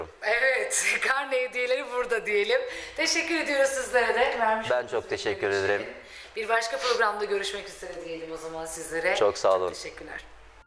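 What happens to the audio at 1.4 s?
Nothing goes wrong at 1.4 s; the audio plays through that moment without any dropout, glitch or distortion.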